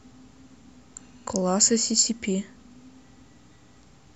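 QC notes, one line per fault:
Throughout: mains buzz. Sharp switching spikes from a dimmer, rectifier or poorly shielded line are getting into the signal path twice every cycle of a 60 Hz supply, so the interference is a dense comb of harmonics stacked on 60 Hz, climbing well into the kilohertz range. Under the speech this comes across as a steady, raspy buzz rather than a smooth hum, sitting low in level at roughly 40 dB beneath the signal.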